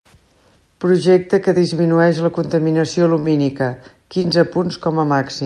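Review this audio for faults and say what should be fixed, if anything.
A brief smeared wobble follows "que disminueix la contaminació" at 3.19 to 3.29 s, and a shorter blur occurs at 4.22 to 4.26 s. These are short concealed packet losses: about 40 ms and 20 ms of speech arrived too late, so the decoder extended the preceding sound before blending back into the real signal. A larger jitter buffer or forward error correction on the link would prevent them.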